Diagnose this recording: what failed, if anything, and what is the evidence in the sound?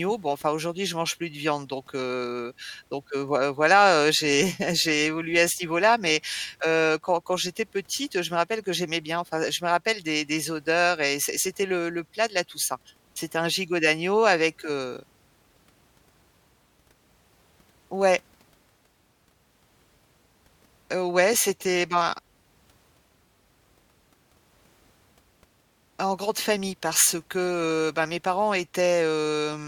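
Nothing in the recording points to a failure at any stage of the chain. The speech arrives intact, with no audible event that would tie a problem to the wiring, the converter, the transport or the playback side.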